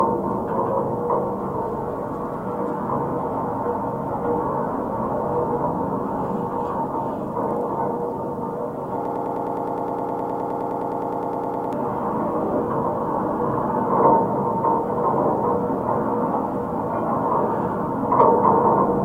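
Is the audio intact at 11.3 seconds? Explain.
No. At 11.3 s you're in the middle of a broken-record loop running from about 9.05 to 11.73 s. A short fragment of about 0.10 s repeats back to back, 26 times, so it sounds like a fast, mechanical stutter. The likely cause is the player or stream stalling and resending the last chunk it held. Whatever should have played in that span is simply gone.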